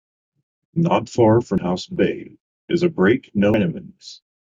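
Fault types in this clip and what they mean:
Damaged data in a compressed stream: a couple of spots in the speech where the coded bytes are corrupted, so the decoder misreads those frames and has to resync on the next good header. You hear it as short chirps or blips at about 1.58 s and 3.54 s.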